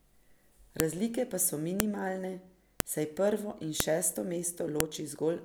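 Sharp snaps hit at 0.80, 1.80, 2.80 (right before "saj prvo in šesto"), 3.80 and 4.80 s. That's a file header played as audio, with one-second pieces joined and their header bytes left in.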